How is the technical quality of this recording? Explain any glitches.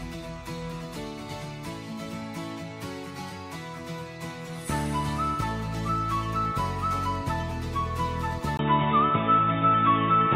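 One glitch near the end. An input switched to a poorer device at 8.57 s, likely a change of microphone. After a 20 ms silence, nothing above 3.8 kHz remains, the sound turns dull, the level shifts about 5 dB, and a faint new noise floor appears.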